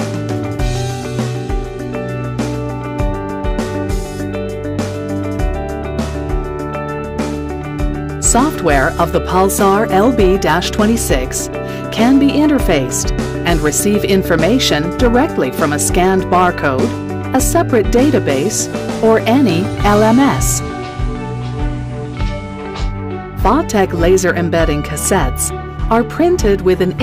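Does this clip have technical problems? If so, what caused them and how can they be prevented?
Yes. Hard clipping occurs at 8.25–11.15 s, 13.47–16.84 s, 17.35–18.35 s, 19.04–20.51 s, 23.45–24.64 s and 25.91–27.02 s. In each stretch the sound is pushed about 3 to 6 dB past the level a stage in the chain can carry, so the peaks are sliced flat. Those squared tops add high harmonics, heard as crackle and harsh fuzz on the loud parts. Leave enough headroom at every gain stage, or use a limiter ahead of the converter.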